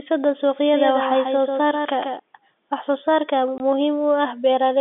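From 0.74 to 2.2 s, a doubled audio track appears. A second copy trails about 150 ms behind, roughly 5 dB quieter, likely from a slower capture path. From 3.58 to 3.60 s, packet loss filled with silence cuts a 20 ms hole with hard edges, which fits one lost packet, within the narrow telephone-band sound.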